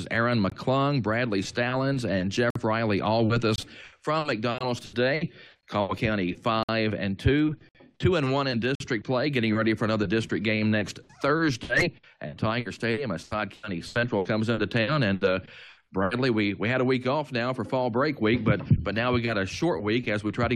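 From 0.50 s you get a gap between stream segments roughly once a second, at 0.50, 2.50, 3.56, 4.58, 5.61, 6.63, 7.69 and 8.75 s. Each is a hard-edged hole of silence, 20 to 60 ms long, where mismatched segment timestamps leave nothing to play. No audio is lost.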